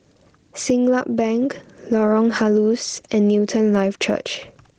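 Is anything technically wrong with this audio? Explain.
Yes. Gain pumping throughout: excessive input gain likely feeds a fast limiter, so the gain swings about 10 dB and loud and soft parts end up squashed closer in level.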